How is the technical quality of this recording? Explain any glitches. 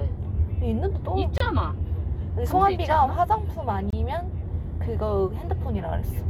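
The recording is marred by two gap between chunks faults. At 1.38 to 1.40 s and 3.90 to 3.93 s, about 25 ms of silence cuts in, 2.5 s apart. The audio was handled in 2.5 s chunks, and a silent pause sits at each join, heard as brief dropouts.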